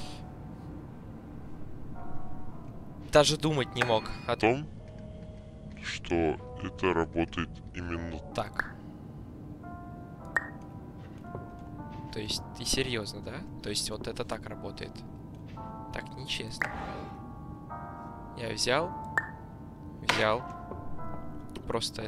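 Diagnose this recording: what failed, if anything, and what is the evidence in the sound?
A section at the wrong speed runs from 4.42 to 8.32 s, where the sound plays at 0.709 times its proper rate, dropping about seven semitones and slowing together. That points to a likely clock mismatch at playback or editing. Unlike pitch-shifting, which preserves timing, here pitch and tempo shift together.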